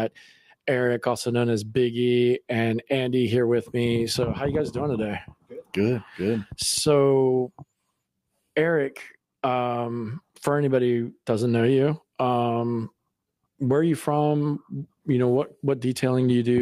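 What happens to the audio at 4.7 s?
Nothing goes wrong at 4.7 s; the audio plays through that moment intact, with no dropout, click, glitch or other fault to be heard.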